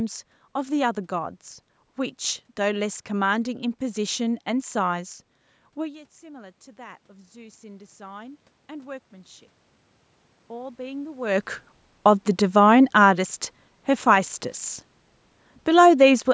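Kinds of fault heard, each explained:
Automatic gain rising: After the input drops by about 21 dB around 6 s, when the talker moves away, the gain control slowly lifts its level. From 5.78 to 9.52 s the voice and room noise swell together by about 9 dB. The rise is gradual, not a jump.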